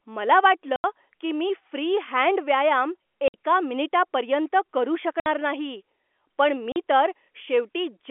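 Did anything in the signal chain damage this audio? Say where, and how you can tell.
Yes, network side: packet loss filled with silence leaves hard-edged gaps at 0.76–0.84, 3.28–3.34, 5.20–5.26 and 6.72–6.76 s, each a multiple of 20 ms.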